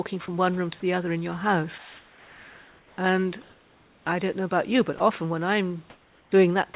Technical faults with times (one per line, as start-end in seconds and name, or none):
0.26-0.28 sound dropped by the voice detector
1.78-2.98 comfort noise in place of the background
3.42-4.06 comfort noise in place of the background
4.98 sound dropped by the voice detector
5.90-6.32 comfort noise in place of the background
6.74 sound dropped by the voice detector